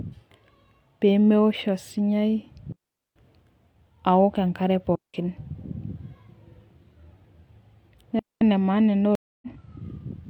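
Digital wireless dropouts cut the speech at 2.72–3.16 s, after "aoko enkare" at 4.95–5.14 s, and before "maana ena" at 8.19–8.41 s. The receiver mutes cleanly. No noise bursts occur. A stream reconnect follows "maana ena" at 9.15–9.47 s. About 270 ms of silence passes. The speech then resumes roughly a third of a second later.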